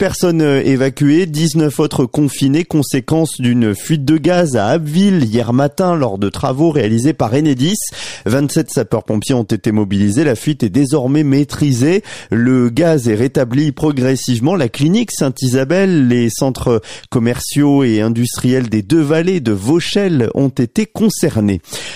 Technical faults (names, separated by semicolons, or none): none